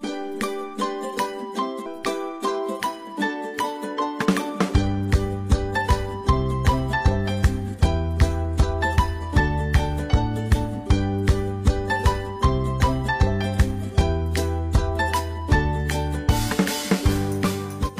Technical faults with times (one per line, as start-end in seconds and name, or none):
1.81-1.86 damaged data in a compressed stream
17.84-17.90 damaged data in a compressed stream